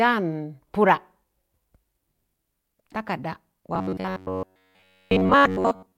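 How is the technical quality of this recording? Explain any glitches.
The recording degrades near the end. From 3.75 s onward, speech turns into a rigid metallic buzz at 93.8 Hz. This is robotic sound from repeated short buffers, likely an 11 ms fragment looped for most of that span while fresh audio is skipped.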